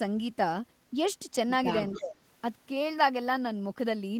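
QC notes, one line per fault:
1.92–2.02 s, echo leak: a faint copy of the speech, roughly 25 dB below it, arrives 276 ms late. This is likely residual loudspeaker pickup the far-end echo canceller failed to remove.
1.94–2.22 s, speech suppressed in double talk: the speech dips by around 20 dB over roughly 0.3 s, likely because the canceller attenuated both talkers during overlap.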